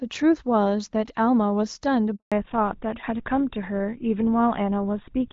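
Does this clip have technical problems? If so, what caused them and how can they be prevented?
Yes. At 2.16 s the speech cuts out abruptly and stays silent for 160 ms until 2.32 s. This is a handover gap: the call switched networks and no speech frames arrived during the transfer. Keeping the handset on one stable network, or using a network with seamless handover, prevents it.

From 2.32 s to the end the speech turns duller and rougher, with nothing above 4 kHz. This is a fallback to narrowband: the call dropped from HD Voice, which fits AMR-WB at 12.65 kbit/s, to GSM full rate. Ensuring both ends and the target network support HD Voice keeps the wideband codec in place.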